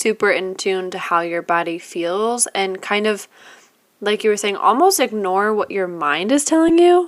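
At 1.00 s, between "in tune to" and "your body feels and", a corrupt frame was decoded: damaged bits in what sounds like a couple of compressed frames were played as if valid, so misread gains and codes put energy at the wrong frequencies. It is heard as a brief, fairly quiet glitch. A second corrupt frame decoded from 6.68 to 6.71 s spans about one frame but peaks around -5 dBFS, giving a sharp, loud glitch.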